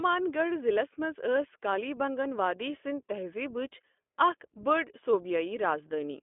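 Speech carries iLBC codec damage throughout: nothing above 3.7 kHz, and a rough, synthetic grain that plain G.711 narrowband lacks, fitting independently coded 20 ms frames at 15.2 kbps.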